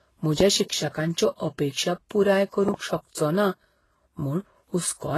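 Throughout the speech, smeared, watery artefacts of two kinds overlap and nothing passes above 12.3 kHz, pointing to transcoding between lossy codecs, likely low-bitrate HE-AAC followed by Vorbis, not a single codec.

At 2.69–2.76 s, just after "शिक्षकांच्यो अपेक्षा पुराय", a loud pop, two sharp clicks about 15 dB above the speech, sits on top while the speech continues, likely an electrical step rather than a dropout.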